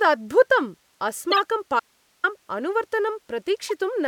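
At 1.30 to 1.39 s the speech is broken by a corrupt frame decoded: a run of around five compressed frames carried damaged bits, and the decoder played them regardless. Misread codes and gains throw energy into the wrong frequency bands, heard as a chirp, squeak or burst of noise peaking near -10 dBFS.

From 1.80 to 2.24 s there is an audio dropout to a faint residue. The speech cuts off abruptly for 440 ms and returns just as suddenly, and the gap holds only hiss at roughly 40 dB below the speech level. That hiss shows the path downstream stayed live while the wanted signal was lost, most likely through a break upstream of it rather than a mute or pause.

At 3.69 to 3.71 s a second corrupt frame decoded appears, shorter and quieter. About two frames are affected, giving a brief chirp, blip or burst of noise peaking near -25 dBFS.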